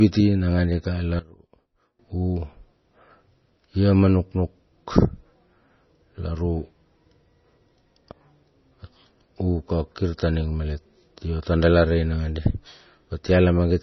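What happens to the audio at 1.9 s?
Around 1.9 s the speech sinks by about 19 dB between 1.19 and 1.99 s, leaving a faint residue, likely one channel inverted cancelling the shared centre in mono; the waveform visibly collapses there. Throughout, the audio is watery and dull with nothing above 6 kHz, likely heavy MP3 compression at a low bitrate, shown on a spectrogram as a flat ceiling with flickering gaps.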